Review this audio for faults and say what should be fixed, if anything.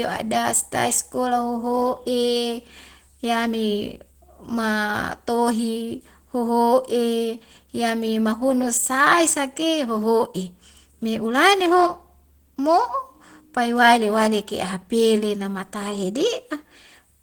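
Throughout the speech the sound is plainly degraded, with a hoarse, rough, slightly muffled texture and grainy upper frequencies. This is likely Opus compression running in its hybrid speech mode, where too few bits leave bands coarsely coded or noise-filled, consistent with roughly 16 kbps. Encoding at a higher Opus bitrate, or keeping an uncompressed master for review, would prevent this.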